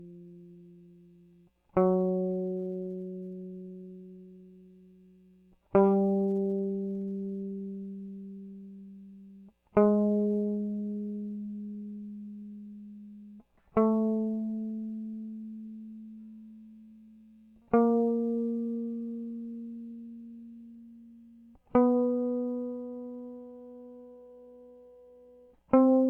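Nothing technically wrong turns up anywhere in this music clip; it's a fault-free listen all the way through.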